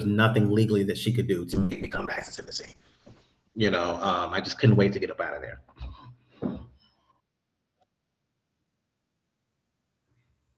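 From 1.54 s to the end, a call bitrate drop occurs: the encoder's budget collapses, which fits a fall from about 48 to 6 kbps, bottoming out for 1.19 s. Coarser coding makes the speech rough and watery, and the top end narrows from 20 kHz to 8 kHz, leaving it muffled.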